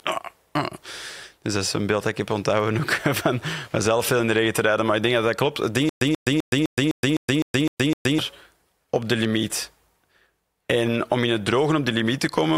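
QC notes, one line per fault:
5.89–8.19 s, stutter with silent gaps: the speech stops moving forward and a short burst of about 134 ms repeats nine times, each followed by about 120 ms of digital silence, so the pattern cycles every 255 ms at an even, mechanical pace. This is likely a playback or stream stall, with each retry replaying the last buffered fragment before running dry. The speech that should have filled this stretch is lost, not delayed.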